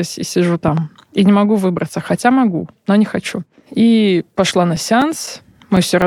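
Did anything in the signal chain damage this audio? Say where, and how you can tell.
Yes. A loud pop, actually two pops in quick succession, occurs between 0.68 and 0.80 s, just after "и сижу", peaking about 10 dB above the speech, which continues underneath. This is likely an electrical transient in the analogue wiring, such as a plug or switch contact, shaped by the circuitry after it.

Periodic USB or driver dropouts run from 4.51 to 6.02 s, in the driver or buffer stage. Around seven short gaps of silence, each a few milliseconds long, repeat every 0.25 s and sound as regular ticks. A background task stalling the audio stream at a fixed interval causes these losses.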